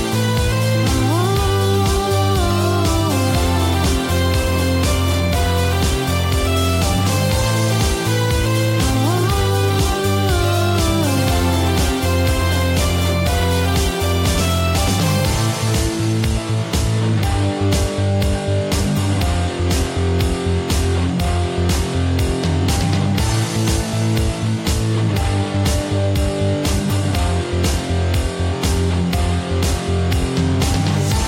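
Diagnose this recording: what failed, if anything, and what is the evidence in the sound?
Nothing failed; no stage shows any fault here.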